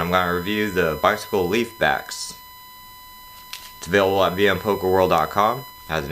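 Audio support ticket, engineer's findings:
USB whine, present for the whole clip. Steady 1 kHz tone, roughly 20 dB below the signal. USB interface supply or ground carrying 1 ms frame current. Unlike mains hum, pitch sits at 1 kHz, not 50/60 Hz harmonics.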